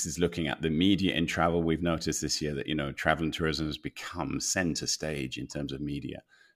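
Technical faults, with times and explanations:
No technical faults can be heard in this speech.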